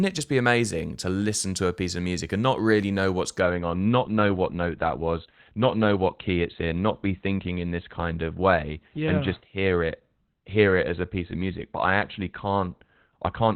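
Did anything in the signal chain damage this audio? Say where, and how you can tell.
Yes. The damage is at the network stage, as an adaptive stream at a lower bitrate. At 3.40 s the speech turns abruptly duller and more synthetic, with no gap, and stays that way to the end. On a spectrogram, energy above the lowered band edge vanishes at that moment, and the upper band looks smeared and blocky. The streaming client switched to a lower-quality rendition when throughput fell, which fits a drop from Opus at 64 kbit/s to about 12 kbit/s.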